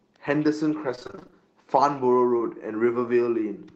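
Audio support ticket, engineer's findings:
Repeated packet loss (robotic sound), 0.95–1.34 s. Choppy texture from ten short gaps, none longer than 25 ms, each patched by extending the previous sound. Concealment covers roughly half the span. Jitter buffer/network side, not codec: holes recur in quick succession rather than once.

Short concealed packet loss, 2.38–2.42 s. Single brief smear where about 20 ms of audio failed to arrive and the receiver continued the last sound before blending back. One isolated gap, no repeated chopping, so no robotic quality as at 0.95 s. Audio band tops out near 8 kHz, which fits Opus at wideband settings.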